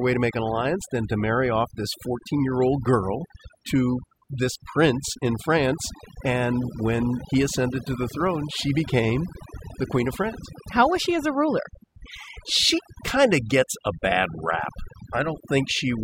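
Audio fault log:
Throughout: overdone noise removal. A noise reduction stage was pushed too hard on this speech, pulling individual frequency bands down or out whenever they sat close to its noise estimate. Soft parts of the voice vanish with them. The background drops and breaks up into twinkling specks.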